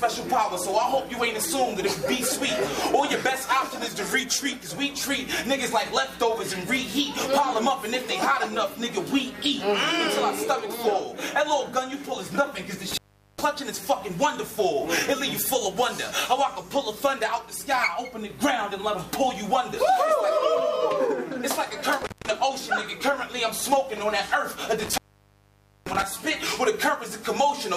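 A loose cable or plug briefly loses contact three times in this audio, an intermittent contact fault: the sound breaks up with crackle at 12.91 to 13.41 s, 22.02 to 22.30 s and 24.79 to 26.03 s, dropping out for about 0.41, 0.18 and 0.89 s while the line is open.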